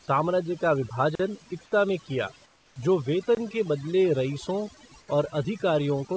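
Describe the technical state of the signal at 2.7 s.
Comfort noise in place of the background covers 2.46 to 2.76 s, right after "इक्ता में किया", so 2.7 s falls inside it. For those 300 ms the real room background, about 34 dB below the loud parts, gives way to a steady, featureless hiss about 6 dB quieter, and the original background returns at 2.76 s. The likely cause is discontinuous transmission: the sender stopped sending audio when it heard no speech, and the receiver filled the gap with synthetic noise shaped only roughly like the room.

Overdone noise removal also runs through this moment, as it does across the whole clip. A noise suppressor set too hard switches off individual frequency bands whenever they sit near its noise estimate, which leaves near-silence speckled with twinkling artefacts and takes the quieter parts of the speech down with them.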